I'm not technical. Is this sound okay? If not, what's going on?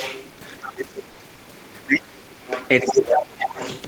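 No, it isn't okay. Three things go wrong in this speech clip.

First, the other side's voice is leaking through. A second, fainter voice comes in from 0 to 0.25 seconds, 0.62 to 0.7, 1.74 to 1.79, 2.48 to 3.19 and 3.46 to 3.82. Most scraps are faint. The one at 1.74 is barely there. The one from 2.48 to 3.19 is almost as loud as the main talker. This is likely the far person's voice coming out of the talker's loudspeaker and getting back into the microphone.

Second, speech is suppressed in double talk. From 0.7 to 1.54, 1.78 to 2.55 and 2.82 to 3.52 seconds, the main voice sinks. In the first two stretches it nearly disappears at its lowest point. The third dip is a bit shallower. The likely reason is that both people spoke at once. The echo remover couldn't tell the two voices apart, so it turned everything down.

Third, there is comfort noise in place of the background. For about 90 milliseconds, from 1.10 to 1.19 seconds, the real room hiss is swapped for a smooth, artificial hiss. 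It is just as loud. This likely happens because the sender briefly stopped sending sound when it heard no speech. The receiving end then filled the gap with made-up noise.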